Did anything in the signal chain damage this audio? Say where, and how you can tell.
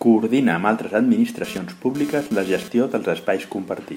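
Yes. In the analogue wiring, a nearby 2G phone's radio bursts were picked up and rectified by the audio circuitry, producing GSM phone buzz. Just after "amb altres", from 1.44 to 2.68 s, a hard, raspy buzz at 217 Hz, rich in harmonics, sits about 16 dB below the speech and ignores its rhythm and pitch. That it appears and then stops fits a phone doing a data transfer.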